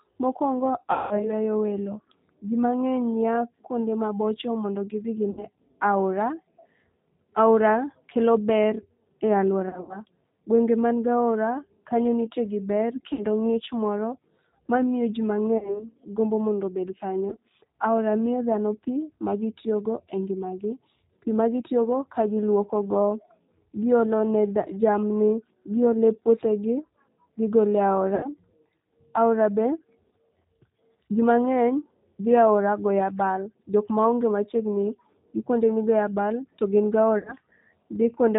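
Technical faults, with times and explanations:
throughout: G.729 codec. The speech has that clipped, slightly buzzy, synthetic quality you get when the voice is rebuilt from a vocal-tract filter, a pitch predictor and a handful of pulses per short frame instead of the real waveform. The roughness is plainly audible, and nothing above 4 kHz comes through, so the top end sounds dull. All of that fits the G.729A variant at 8 kbit/s.
0.93–1.31, 5.31–5.44, 9.69–10.02, 13.13–13.25, 15.58–15.86, 17.30–17.36, 28.15–28.29 and 37.19–37.35 s: VoIP packet loss concealed by the speech codec. At each point audio goes missing and the decoder fills the gap by repeating its last pitch and filter at falling gain, which gives a stretched, buzzy tone or coloured noise that fades. The worst is the first, about 180 ms. Around 9.7 s the losses are scattered, 140 ms over a 200 ms stretch. The rest run 20 to 80 ms, and the speech stays weak or distorted just after each gap.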